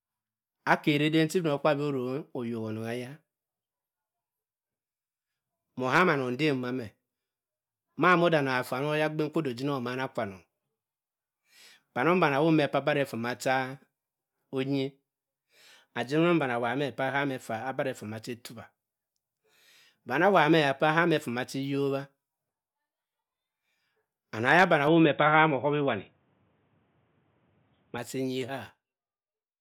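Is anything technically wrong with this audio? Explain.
Yes. An input switched to a poorer device runs from 24.87 to 27.98 s, right after "anong eya bani". The speech abruptly turns dull and boxy, with nothing above 3.8 kHz, and then clears up again at 27.98 s. The likely cause is the recording jumping to a different microphone or a headset's narrowband call profile. There's no gap at the switch and the loudness stays about the same, but a faint new background noise sits well below the speech for that stretch.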